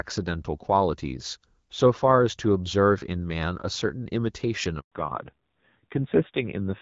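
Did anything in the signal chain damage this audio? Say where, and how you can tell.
Yes. The damage sits in the network. There is a handover gap from 4.80 to 4.92 s. The speech fades out within a few tens of milliseconds and stays silent for about 120 ms. No frames arrived while the call moved from one network link to another. Nothing was buffered to cover the switch, so whatever was said in that window is simply gone.

The second fault is in the codec stage, a fallback to narrowband starting at 4.92 s and lasting to the end. Before this point the speech carries content up to about 7 kHz, with the light coloration of HD Voice at 12.65 kbit/s. Afterwards nothing remains above 4 kHz. The voice turns dull and rougher, which fits a low-rate narrowband mode around 5.9 kbit/s.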